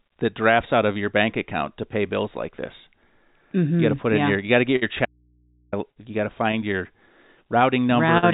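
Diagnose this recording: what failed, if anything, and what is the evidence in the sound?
The fault at the network and jitter buffer stage is a short stall from a late packet, heard three times in this speech. At 4.76 to 4.84 s a sound is held for about 55 ms. At 5.92 to 5.98 s the hold is 43 ms, and at 8.18 to 8.25 s it is 46 ms. Each time, the packet arrived late and the buffer ran dry. The receiver stretched the last sound until the packet came. Nothing is skipped, but playback slips later by the length of each hold.

An audio dropout to a faint residue runs from 5.05 to 5.73 s, about 670 ms. The speech cuts off abruptly and comes back just as abruptly. The gap is not silent. It holds mains hum about 40 dB below the speech. Because the hum stays, the path after the break was still live. The likely cause is an intermittent analogue connection that left the input open. Throughout, the band stops at 4 kHz, which fits a G.711 call codec.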